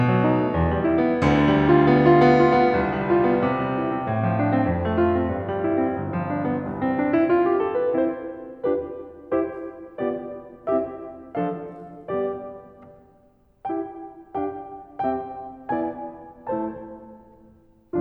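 Music clip, no audible faults.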